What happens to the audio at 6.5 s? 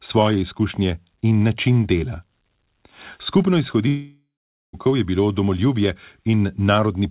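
At 6.5 s the audio is intact, with a narrowband call-path sound: nothing above 4 kHz, which points to a telephone-grade codec such as G.711.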